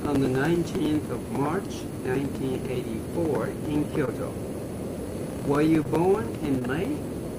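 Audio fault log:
4.05–4.09, 5.83–5.87 and 6.59–6.63 s: short concealed packet loss. Each time 20 ms of audio arrived too late, so the decoder extended the preceding sound for 16 to 19 ms and blended back, leaving a brief smear rather than an unconcealed dropout's silent gap or click.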